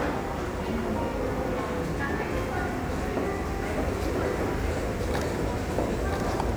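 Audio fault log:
3.62 s to end: doubled audio track. A full-band copy of the sound comes in abruptly, about 5 dB down and roughly a second behind, with no decay or room colour. Likely a slower second capture path mixed in with the first.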